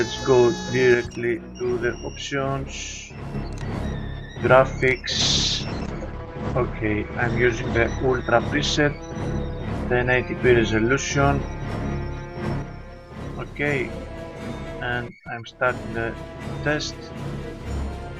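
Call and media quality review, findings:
Level steps down about 6 dB, abruptly, 0.94–3.34 s and again 12.62 s to end; any content unique to one side vanishes. Likely one channel drops out upstream of the mono downmix, so the sum keeps only half the shared signal.

Sound turns rough, watery and muffled, 5.21–11.23 s; top end gone above 8 kHz. Call bitrate drop: bandwidth estimate fell, encoder pushed from 48 to 11 kbps, bottoming out for 2.71 s, coarser coding and a narrower band until it recovers.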